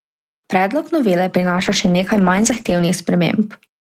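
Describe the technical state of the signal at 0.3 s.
At 0.3 s the speech signal is intact, with no audible fault at that point.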